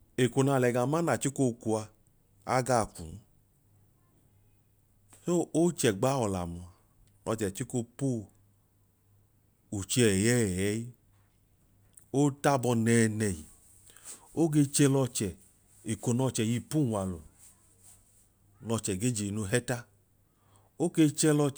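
A speech recording, and nothing technically wrong turns up anywhere in it.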